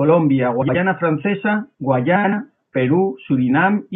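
At 0.62 to 0.75 s and again at 2.15 to 2.33 s, the speech has frames out of order: two adjacent blocks of about 64 ms and then 85 ms play swapped. Each stretch becomes a garbled flutter, while overall timing stays intact.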